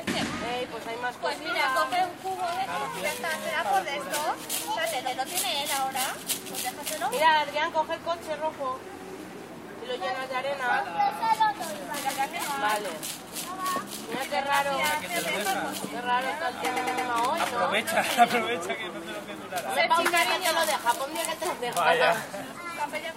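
Repeated frames at 5.06 s and 12.08 s replay a 128 ms block once; at 16.76 s a 107 ms block plays three extra times. Unlike a dropout, nothing goes missing: the sound stutters and lengthens.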